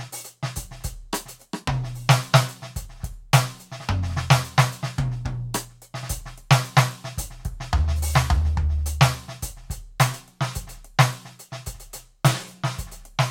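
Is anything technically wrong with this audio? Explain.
No, nothing in this music stood out as a technical problem on listening.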